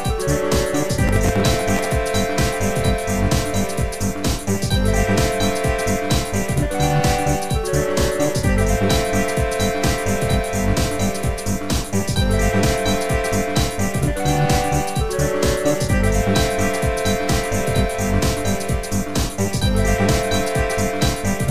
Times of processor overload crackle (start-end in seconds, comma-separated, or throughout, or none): 1.07-1.92